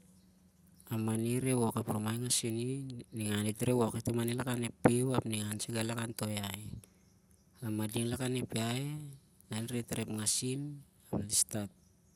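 At 9.69 to 9.84 s and again at 11.71 to 11.79 s, the speech breaks into DAB burbling. Weak reception let bit errors slip past error correction. A small fraction of a percent of bits fits this. Corrupted samples put short blips of noise into single sub-bands.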